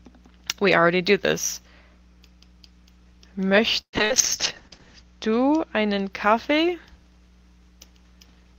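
A packet arriving late emptied the jitter buffer at 3.49 to 3.54 s, causing a short stall from a late packet: the receiver held the last sound for about 16 ms, then resumed where it left off, so nothing is lost but the sound briefly hangs with a faint buzz. Two bursts of packet loss follow. At 3.81 to 3.96 s roughly 120 ms of audio never arrived; the concealed continuation fades and leaves about 80 ms of near-silence before playback jumps ahead. At 4.05 to 4.13 s about 60 ms is lost the same way, as a short held buzz or hiss. Overlapping these, a call bitrate drop runs from 3.93 to 6.17 s. The bandwidth estimate collapsed and the encoder coded far more coarsely, consistent with a fall from 32 to 8 kbps, bottoming out for about a second. The sound turns rough and watery, and its top end is cut from 20 kHz down to 8 kHz, giving a muffled tone until quality recovers.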